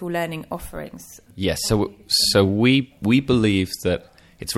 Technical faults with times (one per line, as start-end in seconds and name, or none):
none